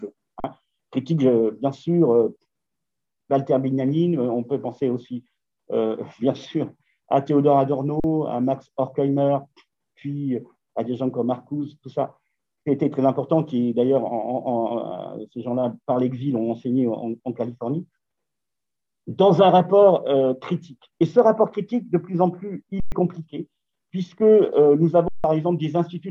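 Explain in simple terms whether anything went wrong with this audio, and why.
An underrun with held sample hits four times: at 0.4 s and 8.0 s for 40 ms each, at 22.8 s for 120 ms, and at 25.08 s for 160 ms. Each time, the playback buffer ran dry. The converter froze on its last value, so the waveform went flat and the sound stopped with little or no click. Roughly the same stretch of audio was lost during each gap.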